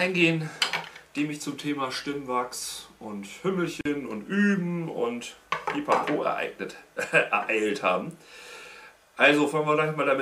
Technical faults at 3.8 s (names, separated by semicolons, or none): gap at a join of encoded pieces